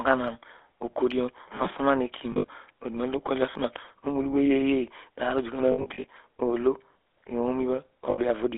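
Speech squeezed through a GSM full-rate codec the whole way: buzzy, gravelly, band-limited to roughly 300 Hz to 3.5 kHz, the kind of roughness that fits a 13 kbps link. Lost GSM frames hit at 2.32 to 2.48 s, 5.72 to 6.05 s and 8.10 to 8.19 s, where the decoder keeps repeating the last good frame and smears the sound into a brief metallic ring.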